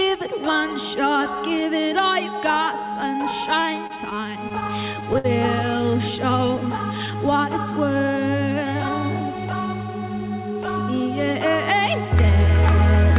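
From 3.76 to 5.26 s the audio catches and stutters: twelve brief hitches, the longest about 60 ms, add up to roughly 194 ms of stretched sound, about 13% of that stretch. Nothing goes missing, but the flow drags. These are repeated stalls (stutter): packets arrived late or slower than playback, so the jitter buffer kept running dry, and each time the receiver extended the last sound until fresh audio came in. Then from 5.91 to 7.32 s the audio runs slow at unchanged pitch, at about 92% speed, with drawn-out sounds. This is a jitter buffer slow-down: with its reserve low, the receiver repeated single pitch periods and slivers of pauses to rebuild it, adding about 114 ms. Throughout, the call path's band limit is audible as a dull top with nothing above 4 kHz, which fits G.711 mu-law at 64 kbps.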